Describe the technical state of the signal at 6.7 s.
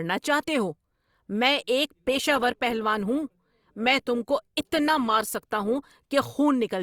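At 6.7 s the audio is intact, with no fault to be heard at that moment.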